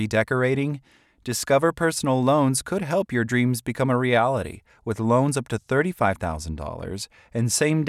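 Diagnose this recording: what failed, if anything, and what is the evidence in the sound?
Nothing in the speech stood out as a fault on listening, so there is no failed stage to point to.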